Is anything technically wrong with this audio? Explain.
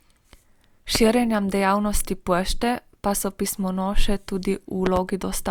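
Yes, there are two loud pops. A sudden voltage spike, likely from a plug, switch, static discharge or driver glitch, enters the chain. It produces a single sharp pop at 0.95–0.98 s and a quick double pop at 4.86–4.99 s, each roughly 15 dB above the speech, which continues underneath.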